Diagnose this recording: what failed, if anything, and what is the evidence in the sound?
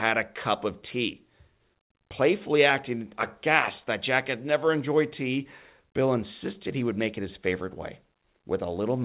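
Nothing failed; no stage shows an audible fault.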